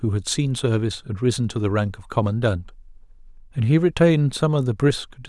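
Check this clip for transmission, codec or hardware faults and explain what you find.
The speech signal shows no transmission, codec or hardware fault anywhere in the recording.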